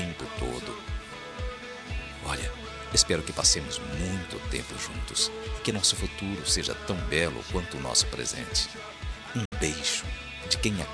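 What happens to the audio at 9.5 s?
At 9.45 s the sound drops out in a digital broadcast dropout, staying silent until about 9.52 s. The receiver hit a couple of bad frames, which fits two frames of roughly 32 ms each failing their checksum, so it muted rather than play garbage. The fade down is very fast, about 3 ms, so it reads as an abrupt hole of around 64 ms. Whatever was sent during that gap is simply gone when the audio picks back up.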